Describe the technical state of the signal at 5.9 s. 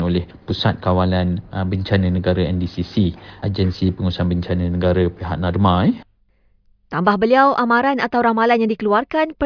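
Nothing is wrong with the signal at 5.9 s; the speech passes through intact at that moment.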